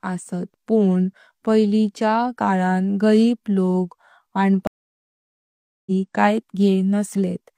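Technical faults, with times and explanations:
4.67 to 5.90 s, stream reconnect: the connection dropped for about 1.19 s of silence, then a fresh decoder picked up about a second further into the speech.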